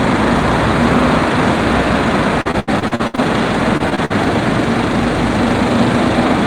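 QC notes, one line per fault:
2.41–3.19 s and 3.77–4.12 s, repeated packet loss (robotic sound): the audio keeps dropping out in short bursts, gaps up to 77 ms, and each hole is filled by stretching the previous sound. That makes the passages choppy, with about 40% and 30% patched.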